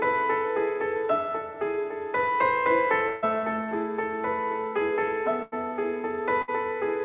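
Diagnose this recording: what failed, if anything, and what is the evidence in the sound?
The network stage failed: three bursts of packet loss reached the receiver as gaps, and its concealment filled each one by extending the last sound and fading it down. The concealed stretches run 3.08 to 3.24 s (about 140 ms missing), 5.42 to 5.54 s (about 100 ms) and 6.42 to 6.50 s (about 60 ms). Each is heard as a held buzz or fading hiss, and the sound then resumes further along with that stretch gone. The G.711 A-law call path's 4 kHz top limit is audible throughout.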